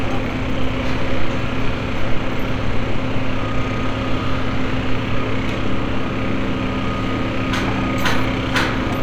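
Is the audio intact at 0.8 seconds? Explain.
Yes, at 0.8 seconds the sound plays through intact with no audible fault.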